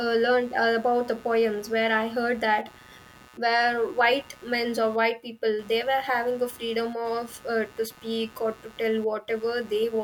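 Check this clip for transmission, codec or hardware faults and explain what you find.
One hardware fault runs through the whole recording: computer activity noise. A buzzing, chirping layer pulsing around 150 times a second sits roughly 25 dB under the speech, rising and falling with the computer's workload rather than the talking, as processor and graphics load currents disturb the shared ground of the audio circuit.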